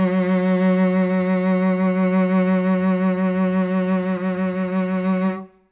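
No technical faults can be heard anywhere in this music.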